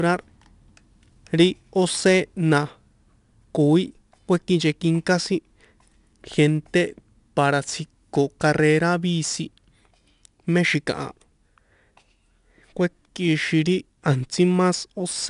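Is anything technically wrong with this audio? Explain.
Yes. The speech carries 4-bit ADPCM compression from start to finish. Each sample is coded as a coarse 4-bit step from a predicted value, and the step size adapts as it goes. The error forms a gritty hiss that rides on every loud syllable and rises and falls with the level. Sharp attacks distort where the step cannot grow fast enough. Nothing is heard above about 10.6 kHz, so the sound is dull. That fits a bitrate near 89 kbps.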